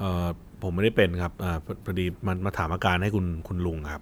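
No technical faults can be heard in this recording.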